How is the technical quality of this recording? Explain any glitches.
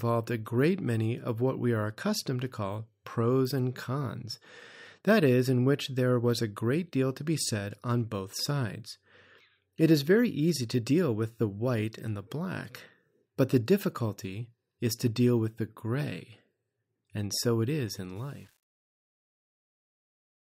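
The recording has one technical fault, at the very end.

From 18.16 s to 20.47 s, just after "so it is in", the speech fade-out shows truncation distortion. The fade starts around 18 s, but the gain stage carries too few bits and adds no dither, which fits an 8-bit path. From 18.31 s onward, as the level falls toward the smallest step, the waveform collapses into coarse square steps. The tail sounds gritty.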